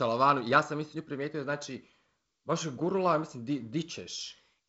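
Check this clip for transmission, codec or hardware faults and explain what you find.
No faults are present in this speech, which comes through G.722 wideband telephone coding at 48 kbit/s, with nothing above about 7.7 kHz and only the light hiss and slight lower-band graininess that this coding leaves at that rate.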